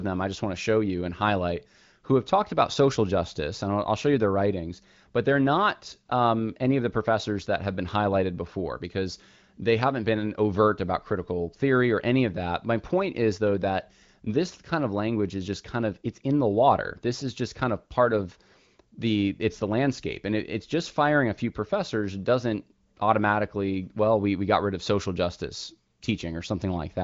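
Nothing here needs flagging: the speech comes through the AMR wideband (HD Voice) codec at its 23.05 kbit/s rate, with the usual ceiling leaving nothing above about 7.6 kHz.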